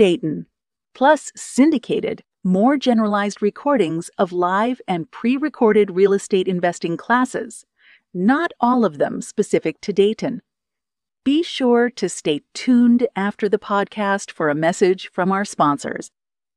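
No technical faults can be heard anywhere in the recording; the signal holds steady throughout.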